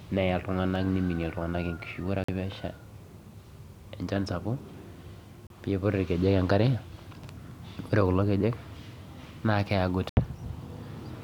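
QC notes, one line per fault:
2.24–10.17 s, Bluetooth stall: the speech cuts to brief silence three times, at 2.24–2.29 s after "iltung'anak neimini enkishui ore", at 5.47–5.50 s before "keiput irkejek enkare", and at 10.09–10.17 s, then resumes. Likely interference held back packets until the headphone buffer ran dry.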